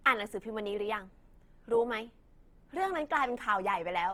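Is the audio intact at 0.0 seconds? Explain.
No. Opus compression colours the speech from 0.0 s onward. Bands are noise-filled at a low rate, likely around 24 kbps, so the sound turns rough and grainy.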